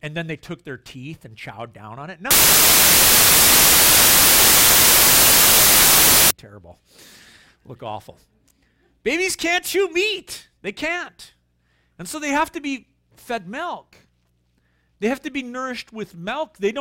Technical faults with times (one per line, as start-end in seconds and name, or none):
2.31-6.31 samples built from the wrong bytes